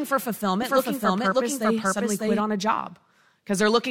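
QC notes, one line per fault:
0.62–2.40 s, doubled audio track: a second, full-band copy of the sound runs roughly 0.7 s behind the original at about the same level, with no decay or room colour, so every event is heard twice. The copy starts and stops abruptly, likely from a second capture through a slower path or an edit holding two offset copies. A spectrogram shows each pattern repeated identically 0.7 s later, and the waveform shows duplicate envelopes of equal height.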